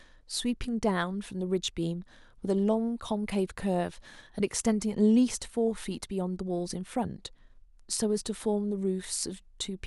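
No technical faults can be heard in the recording.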